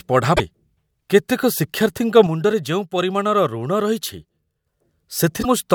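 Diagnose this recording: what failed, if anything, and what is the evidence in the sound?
Damaged data in the compressed stream, at the codec or storage stage: brief glitches from 0.33 to 0.40 s and from 5.39 to 5.45 s. The decoder misreads corrupted frames, loses sync and resumes at the next header.

One channel drops out from 2.27 to 4.67 s. The speech level falls abruptly by about 6 dB and then returns just as suddenly, which is what a mono sum does when one side of a stereo pair is lost. The likely cause is a wiring or connector fault. A gain-stage fault would ramp or drift, but this is a clean 6 dB step down and back up.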